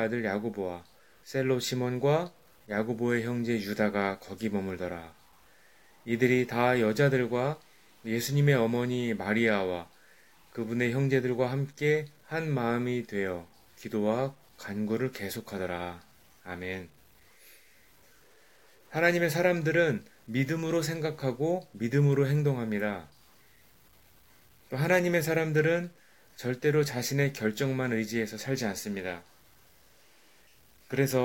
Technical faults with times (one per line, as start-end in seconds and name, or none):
0.00-31.24 low bit depth without dither